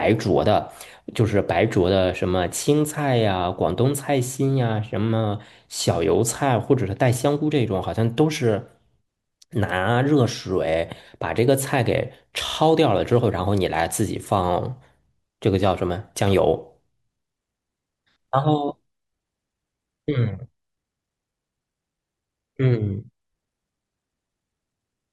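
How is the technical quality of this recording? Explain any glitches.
One glitch stands out in the speech. From 12.47 to 12.57 s there are repeated frames: a 48 ms block, consistent with a couple of codec frames, plays two extra times, adding 96 ms. It sounds like a brief stutter. Unlike a dropout, nothing is missing; the same sound recurs.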